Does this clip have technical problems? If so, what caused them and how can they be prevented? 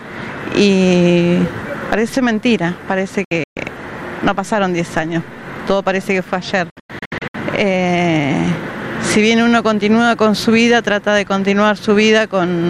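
Yes. A digital broadcast dropout: the receiver lost signal and muted, cutting the sound in short scattered holes at 3.24–3.57 s and 6.70–7.35 s. A stronger signal, better antenna placement, or more robust error protection would prevent it.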